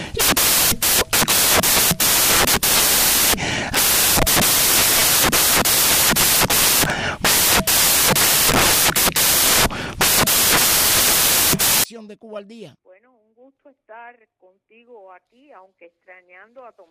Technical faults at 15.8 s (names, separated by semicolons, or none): none